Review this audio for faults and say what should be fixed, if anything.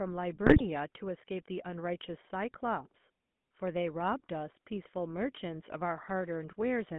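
The GSM full-rate codec affects the whole clip. Speech sounds buzzy and gravelly, confined to 150 Hz to 3.5 kHz. A spectrogram shows a hard ceiling at 3.5 kHz and smeared, coarse harmonics. A wideband codec would prevent this.

GSM bit errors occur from 0.44 to 0.62 s. Corrupted filter, pitch and gain values produce squawks and gargling. A waveform shows level spikes, and a spectrogram shows distorted, blotchy frames. Stronger channel coding or a better radio link would prevent this.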